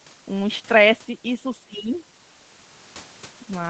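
Speech suppressed in double talk, 1.65 to 1.96 s: the speech sinks by around 30 dB, likely an echo canceller mistaking overlapping talk for echo.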